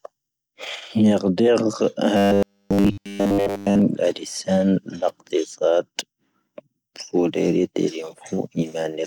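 From 2.17 to 3.82 s the speech turns into robotic sound from repeated short buffers: a rigid, metallic 100 Hz buzz that roughly tracks the words. This is likely starved playback repeating one 10 ms buffer throughout that span, skipping the real audio in between.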